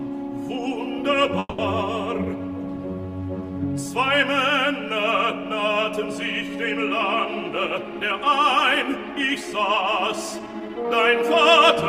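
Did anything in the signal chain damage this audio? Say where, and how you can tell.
Yes. Around 1.39 s to 1.60 s there's a call audio freeze, most likely from packets stalling on the network so the jitter buffer ran dry. The receiver stretched the last bit of sound into a fading buzz or hiss for about 190 ms, then dropped to silence for around 20 ms before the audio picked up right where it left off. Nothing's actually lost. It's a gap inserted into the stream, and everything after it runs about 190 ms later.

Later you get jitter buffer speed-up, twice, from 7.44 s to 8.51 s and again from 10.39 s to 11.23 s. That's the receiver trimming its backlog by cutting out short pitch-period slices, one after another. Pitch stays put but the pace jumps, about 4% faster in the first stretch, shaving off a few tens of milliseconds, and about 10% in the second, roughly a tenth of a second gone, which is where it really sounds rushed.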